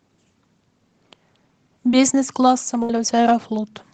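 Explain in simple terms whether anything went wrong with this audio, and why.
Two brief dropouts interrupt this speech, both typical of audio sent over a call connection.

At 1.91 to 1.94 s there is a short concealed packet loss. About 20 ms of audio never arrived in time, and the receiver patched the gap by extending the preceding sound, leaving a tiny smear or wobble.

At 2.83 to 2.90 s comes a burst of packet loss. Roughly 60 ms went missing in a row. The receiver again stretched the last sound into a held buzz or hiss, and the speech then resumes with that stretch lost.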